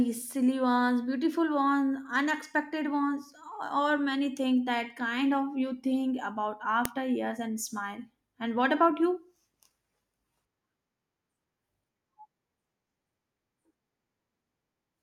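At 6.85 s a sharp, loud click cuts into the speech: a file header played as audio. Two recorded pieces were joined without stripping the second one's header, so those bytes play as samples. The waveform shows a brief spike, and the spectrogram a thin vertical broadband line.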